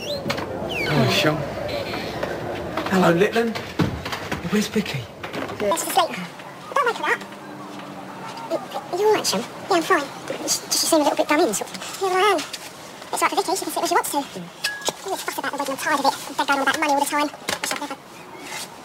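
From 5.71 s to the end, a section plays at the wrong speed. It runs 1.74 times faster than recorded. Pitch rises with it, about ten semitones higher. The sound turns high and hurried. A likely cause is playback against a mismatched clock.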